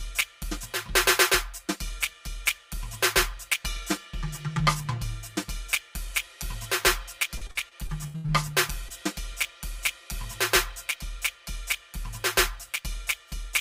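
This music clip sounds hollow and phasey from start to finish, with a scooped colour that never changes. That points to channel delay (comb filtering): one channel is about 5 ms late, so when the two are summed to mono their shared content cancels at evenly spaced frequencies, with the first notch around 100 Hz and further notches repeating above it. Between 7.37 and 8.30 s the music turns choppy, with pieces dropping out in quick succession. This is repeated packet loss, heard as robotic sound: data kept going missing, and each hole was patched by stretching the preceding audio. Those patches cover about a third of the stretch, and the longest single gap runs 82 ms. From 8.88 to 8.92 s there is a brief smear where about 20 ms of audio went missing. This is short concealed packet loss: the decoder filled about 15 ms of the gap by extending the last sound, then blended back into the real signal.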